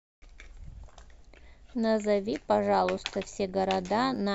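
From about 2.26 s to 4.17 s the speech picks up an overlap-add ripple. The audio was chopped into windowed frames and stitched back together, but the overlapping windows don't add up to a flat gain, so the level swells and dips once per frame, by about 6 dB, at roughly 100 Hz. You hear it as a metallic buzz riding on the voice, with extra tones around it, that lasts until near the end.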